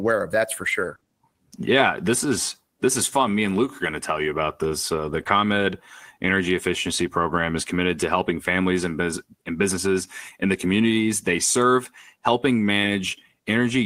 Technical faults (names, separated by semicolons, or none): lost packet rebuilt from error correction; short concealed packet loss